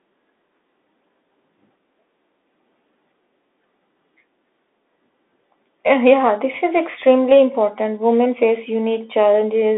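Bluetooth CVSD headset codec damage runs through the whole of this speech clip. CVSD sends one bit per sample, up or down, with an adapting step size, and the narrowband result here, which fits a 64 kbps headset link, leaves a line band of about 250 Hz to 3.6 kHz with nothing above 3.8 kHz. Where loud high content outruns the step, it distorts; s sounds come out scratchy, and a granular hiss sits under the speech.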